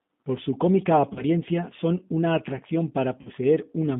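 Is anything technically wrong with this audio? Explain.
Yes, two things. The whole clip has G.729 codec damage: speech squeezed into roughly 150 Hz to 3.7 kHz and rebuilt from a filter, pitch predictor and sparse pulses, which fits an 8 kbit/s G.729 stream. It sounds plainly rough, thin and a bit synthetic throughout.

Then there's VoIP packet loss concealed by the speech codec, twice: 1.13 to 1.23 s, between "su cómica" and "son una atracción", and 3.21 to 3.28 s, right after "son una atracción". The decoder stretched its last pitch and filter over roughly 30 and 40 ms gaps, so you get a brief buzzy or noisy, fading smear that takes a moment to recover.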